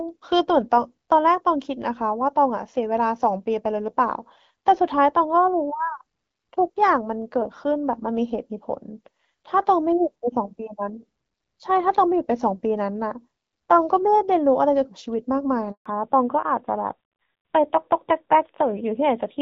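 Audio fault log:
15.72 to 15.86 s, handover gap: the speech fades out within a few tens of milliseconds and leaves 140 ms of silence while the call switches networks and no speech frames arrive. On the waveform this is a flat stretch, and the spectrogram shows a blank vertical band across all frequencies.
15.86 s to the end, fallback to narrowband: after the gap the call resumes on a narrowband codec, with a bitrate that fits AMR-NB at 7.4 kbit/s. Nothing above 4 kHz survives, so the speech sounds duller and rougher. The spectrogram shows a hard ceiling at 4 kHz from here on, where the wideband HD Voice section before it reached up to 7 kHz.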